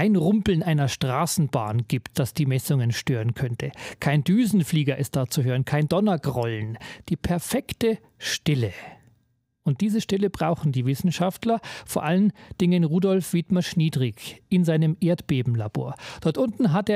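No technical faults can be heard anywhere in it.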